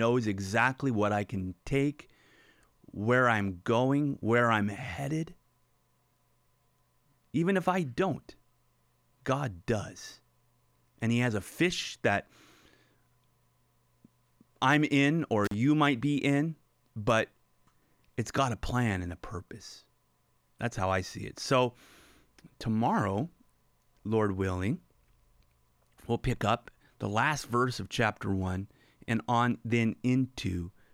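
At 15.45 s to 15.54 s the speech drops out briefly because of an intermittent contact: a loose cable or plug momentarily loses its connection, and the line stays open for about 41 ms. The gap is framed by sharp crackles where the contact breaks and remakes, with faint hiss between them. On a waveform this shows as a near-flat stretch bracketed by spiky transients; a spectrogram shows a pale gap edged by thin vertical broadband streaks.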